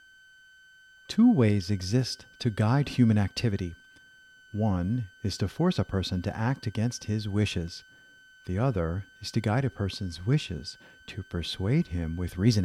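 A switching supply whistle sits under the speech the whole way through, a thin tone wandering between about 1.51 and 1.54 kHz, roughly 30 dB down.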